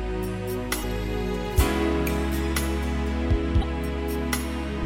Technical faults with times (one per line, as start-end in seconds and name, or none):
0.80-0.84 damaged data in a compressed stream
3.59-3.64 damaged data in a compressed stream